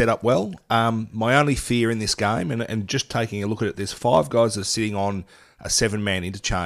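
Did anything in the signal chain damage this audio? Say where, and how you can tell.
No, none of the stages in the chain, from capture and conversion through to playback, left any audible damage on this speech recording.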